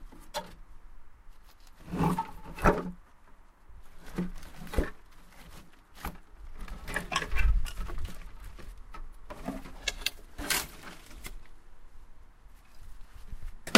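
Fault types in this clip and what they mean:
No faults detected.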